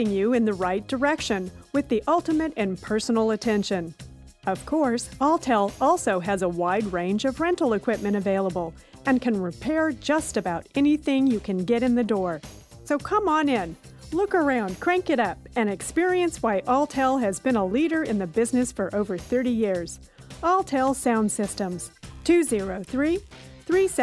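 No technical faults can be heard anywhere in the recording.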